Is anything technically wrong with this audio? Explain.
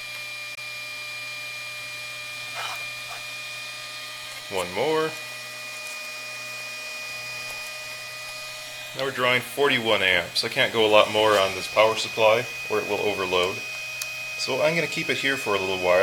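Yes. There is a Bluetooth dropout from 0.55 to 0.58 s. The sound cuts to silence for about 21 ms, then returns. The edges of the gap are abrupt or fade over a few milliseconds. When it resumes, the sound has moved on, as if it kept playing underneath. The likely cause is a packet that did not reach the headphones in time and was discarded. The short gap fits a single lost packet.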